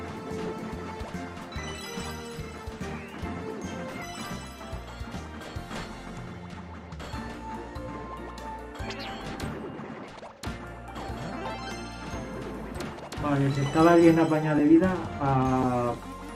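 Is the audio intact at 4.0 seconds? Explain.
No, there is a skip ahead at about 4.01 to 4.03 s. About a second of audio was dropped, either in transit or by an overflowing jitter buffer with later audio already queued, so playback jumps forward with no silence. The two sides of the cut are joined almost directly.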